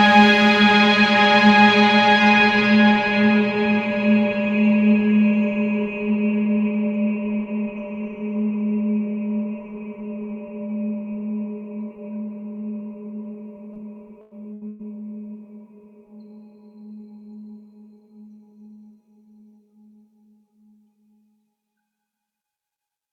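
Right at 13.73 s there's a short concealed packet loss. About 20 ms of audio never arrived in time, so the receiver patched the hole by carrying the previous sound forward for a moment before blending back into the real signal at about 13.77 s. You hear it as a tiny smear or wobble.

Things get rougher shortly after, with three bursts of packet loss packed into about 0.6 s. The first runs from 14.21 to 14.33 s and drops about 100 ms. The second, from 14.53 to 14.63 s, loses about 80 ms. The third, from 14.67 to 14.81 s, loses about 120 ms. Each time, the receiver stretches the last bit of sound across the gap and lets it decay, so you get a held, fading tail. The audio then picks up again further along, with the real content from each gap simply gone.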